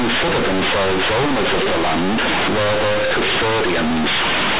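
From start to finish, A-law bytes are played as plain linear 8-bit samples without expansion, companded audio read as linear. Every sign change throws the output across about half its range, so this telephone-band speech becomes very loud, buzzy and distorted, with heavy noise filling the pauses.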